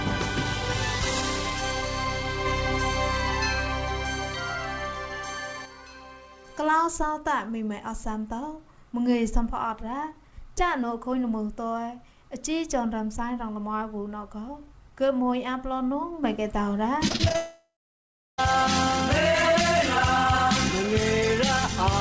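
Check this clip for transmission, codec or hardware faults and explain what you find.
Yes, there are two network faults, back to back near the end; the band limit at 8 kHz just fits a wideband G.722 call path.

Repeated packet loss (robotic sound), 17.08–17.36 s: six short holes, longest about 34 ms, patched by repeating prior sound, so it goes choppy.

Long network dropout, 17.36–18.40 s: about a second never arrives, likely lost packets; concealment buzzes or hisses and fades, then about 0.66 s of silence before audio resumes.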